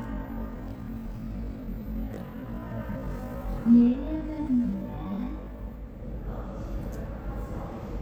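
From 0.0 to 5.6 s, a time-stretched section runs at about half speed (0.506×), dragging, likely from software repeating short pieces; unlike slowed playback, the pitch never drops.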